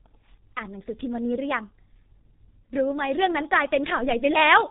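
From start to finish the speech sounds muffled and hoarse, with consonants smeared together and nothing audible above 3.8 kHz. The damage is heavy and steady throughout, which points to the G.723.1 codec. This old internet-telephony coder works in 30 ms frames and refreshes its model of the voice only slowly. At a bitrate that sounds like roughly 6 kbit/s, it cannot track quick changes, so the rasp and blur persist throughout.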